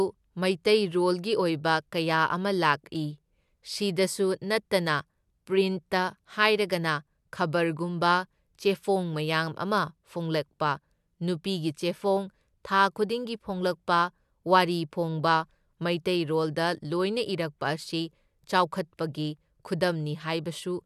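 Nothing technically wrong turns up anywhere in this recording of speech, so there's no problem here to point to.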